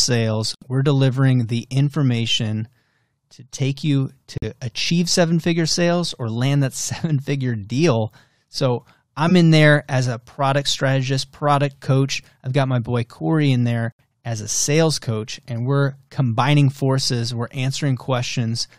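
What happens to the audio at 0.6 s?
A corrupt frame muted dropout runs from 0.55 to 0.64 s. Damaged compressed frames were rejected by the decoder and replaced with silence, so the speech cuts off abruptly for about 90 ms, a gap that fits roughly three lost frames, before resuming on time.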